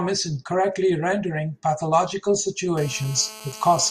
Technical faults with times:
2.77-3.90 GSM phone buzz

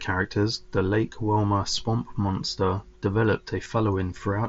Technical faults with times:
1.78 concealed Bluetooth headset packet loss
3.65 concealed Bluetooth headset packet loss

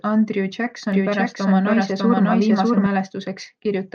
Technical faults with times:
0.92-2.86 doubled audio track

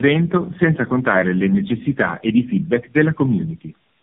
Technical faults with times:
0.00-4.02 tandem speech coding

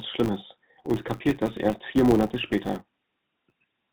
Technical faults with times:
0.00-3.93 GSM full-rate codec
0.00-3.93 filter restarted on every block
2.48-2.51 lost GSM frames

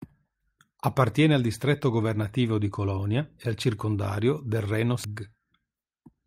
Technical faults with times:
5.04 damaged data in a compressed stream

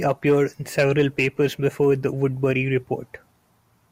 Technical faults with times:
none

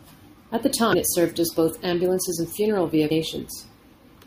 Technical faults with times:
0.93 damaged data in a compressed stream
3.10 damaged data in a compressed stream

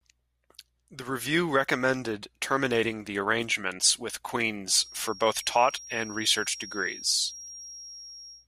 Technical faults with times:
4.72-8.48 feedback whistle

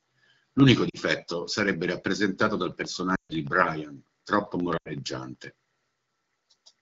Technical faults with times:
0.89-0.96 lost AMR speech frames
3.15-3.36 lost AMR speech frames
4.77-4.90 lost AMR speech frames

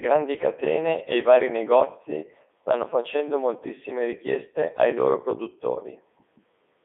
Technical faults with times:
0.00-6.84 Codec 2 vocoder

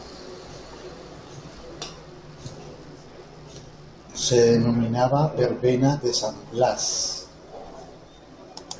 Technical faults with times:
none

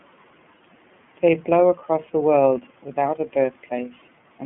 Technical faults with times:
0.00-4.45 iLBC codec

